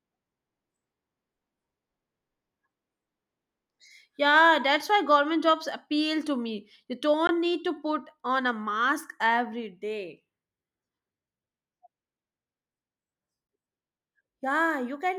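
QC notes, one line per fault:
7.27 s, block of digital silence: about 17.5 ms of samples drop out to silence just before "need to", then the sound resumes. Neither edge has a fade, and the gap is long enough to be heard as a short hole.
13.47 s, block of digital silence: a second zeroed block, 16 ms long, with the same abrupt edges, giving another short hole in the speech.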